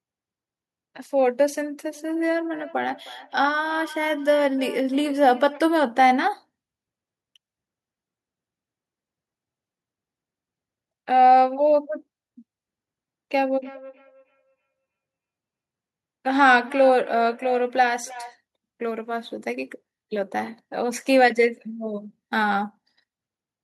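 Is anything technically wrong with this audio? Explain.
Yes. From 1.95 to 5.65 s and from 13.62 to 18.37 s there is feedback echo between two devices: a second device replays the speech into the microphone, beyond the echo canceller's reach, so it returns about every 300 ms, peaking about 21 dB and 19 dB below the speech.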